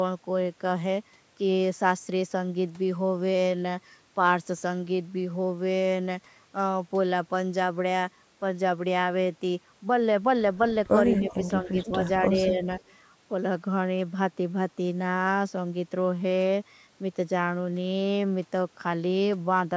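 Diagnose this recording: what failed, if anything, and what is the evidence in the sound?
Echo leak in the call processing: between 11.11 and 11.49 s, and again from 12.8 to 12.95 s, a second copy of the speech trails the original by a steady 210 ms. The first is about 20 dB down; the second is about 40 dB down. The fixed delay and distinct repeat set it apart from room reverberation, which smears into a diffuse tail. The likely cause is a loudspeaker echo canceller leaving residue that was sent back.

Speech suppressed in double talk, also in the call processing: the talker's level is pulled down from 11.18 to 11.4 s (roughly 15 dB at its deepest), from 11.62 to 11.91 s (about 10 dB), and from 12.23 to 12.61 s (a shallow 5 dB dip). Each dip lasts around 150 to 200 ms. These are partial, graded attenuations during what is likely overlapping activity, not hard silences, which distinguishes them from packet loss or buffer dropouts.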